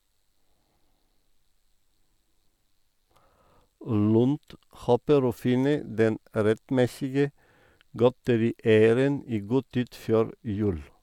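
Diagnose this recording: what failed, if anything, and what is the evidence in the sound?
No fault detected.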